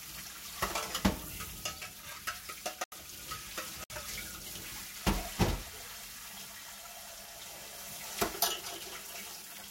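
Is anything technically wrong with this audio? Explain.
Yes. Two blocks of digital silence occur, at 2.84 to 2.92 s (80 ms) and 3.84 to 3.90 s (60 ms). Samples drop abruptly to silence and return, with no fade, leaving a short hole.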